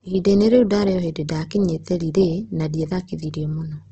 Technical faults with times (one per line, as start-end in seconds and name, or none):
0.00-3.92 Opus compression